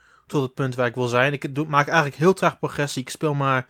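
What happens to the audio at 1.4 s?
At 1.4 s the speech carries on intact, with no fault at that moment.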